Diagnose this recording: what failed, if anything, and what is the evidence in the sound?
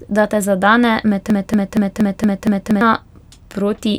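Something upstream froze. From 1.30 s to 2.81 s the speech turns into a broken-record loop: one chunk of about 0.23 s plays six times back to back, with identical repeats and no variation. That points to a stall in the stream or playback buffer, likely where the player kept re-serving the last fragment it held instead of new audio. Whatever should have filled that stretch of about a second and a half is simply gone.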